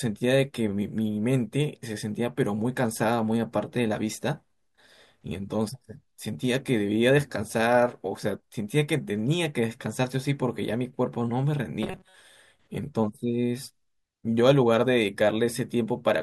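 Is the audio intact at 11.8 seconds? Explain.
No. Robotic sound from repeated short buffers runs from 11.83 to 12.17 s, a rigid metallic buzz near 188 Hz. A tiny buffer, about 5 ms, is likely being replayed repeatedly.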